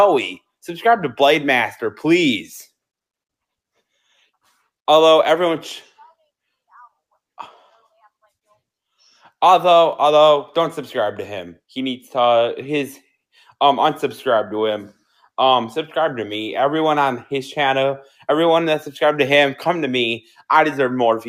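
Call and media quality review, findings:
Noise suppressor misclassified wanted sound as noise at 20.21–20.42 s and applied extra gain reduction. Result: sound cut by the noise suppressor, a dip of about 9 dB lasting roughly a fifth of a second near the end of the clip. The steady or decaying part of the sound is pulled down or its tail clipped short, while sharper onsets mostly come through.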